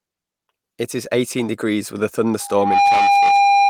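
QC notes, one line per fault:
2.40–3.70 s, loudspeaker feedback squeal: after "eighteen degrees with a", the microphone hears its own loudspeaker and loop gain passes unity at 804 Hz, so that tone feeds on itself, swelling over under half a second to sit a few dB above the speech until the clip ends.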